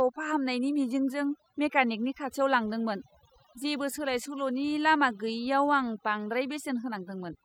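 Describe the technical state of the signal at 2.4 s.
The background drops and is full of twinkling specks: overdone noise removal, running through the whole clip, muting bands near the noise estimate along with quiet voice detail.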